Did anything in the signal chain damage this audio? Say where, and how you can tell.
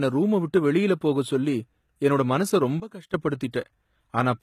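Yes, in two places. The first runs through the whole clip and sits at the codec stage: it sounds like HE-AAC compression. The treble is present but synthetic, with the s sounds coming out gritty and lispy because the top band is being rebuilt from copied lower bands rather than coded directly. Nothing survives above about 14.9 kHz, and the damage is plainly audible, which fits a very low bitrate around 20 kbps.

The second is a sudden gain jump, most likely from a gain setting or level change applied in the processing or driver stage without a ramp. Right after "போகச் சொல்லி என்னோட மனசை", at 2.8 s, the level drops by about 15 dB in one step, and the speech and background noise fall together. At 3.14 s the level snaps back just as abruptly.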